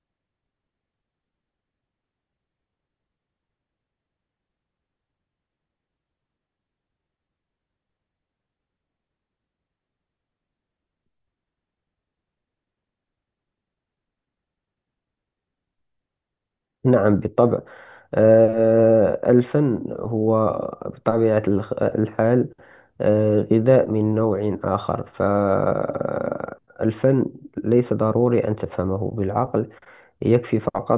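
No technical faults are audible.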